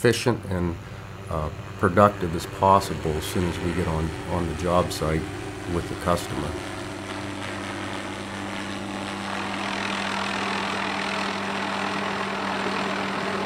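No technical faults are audible.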